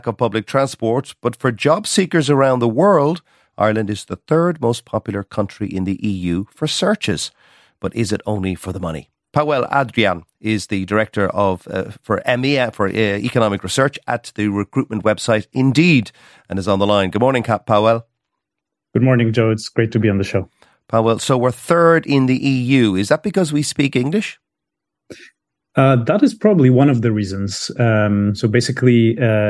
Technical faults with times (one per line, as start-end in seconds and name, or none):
none